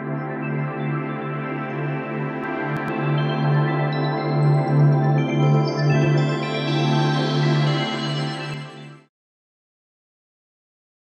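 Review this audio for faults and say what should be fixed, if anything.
From 2.44 s to 8.54 s there is a doubled audio track: a second, full-band copy of the sound runs roughly a tenth of a second behind, at about the same level as the original. It appears and disappears abruptly, with no decay or room colour. The likely cause is a second capture path with extra latency, or an edit that left two misaligned copies. On a waveform each transient shows a twin about 100 ms later. A spectrogram shows every onset repeated as a parallel stripe across all frequencies. To prevent this, route the source through one capture path only, mute any redundant monitor or loopback input, and check edits for overlapping duplicate regions.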